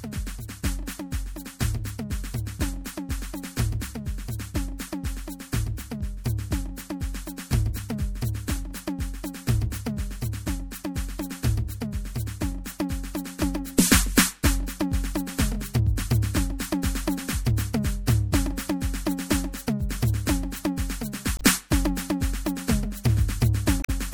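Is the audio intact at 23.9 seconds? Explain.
No. From 23.81 to 23.90 s there is damaged data in the compressed stream: part of the encoded music is corrupt, so the decoder misreads those frames, loses sync and hunts for the next valid header. That comes out as a brief chirp, squawk, click or short hole in the music.

Around that moment the music is also plainly degraded throughout in a way that points to heavy MP3 compression, likely at a low bitrate near 64 kbps. The watery, swirling texture comes from weak frequency components flickering on and off between frames.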